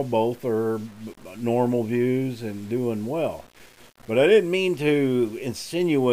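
From start to finish the audio carries a grainy distortion that moves with the signal, turning quiet passages gritty and sputtering, with the error sitting roughly 30 dB below the signal. This is likely low bit depth without dither, consistent with rounding to 7 bits.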